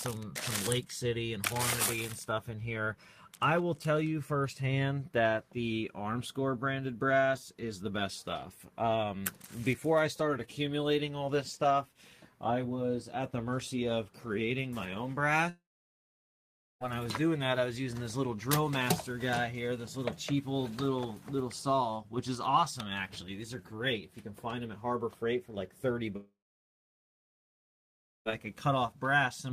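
At 15.49 s the sound breaks into a fading buzz, then about 1.2 s of silence until 16.83 s. It happens again from 26.16 to 28.28 s, with nearly 2 s quiet. It's likely a long network dropout: 1.3 s and 2.1 s of audio never arrived and are simply gone.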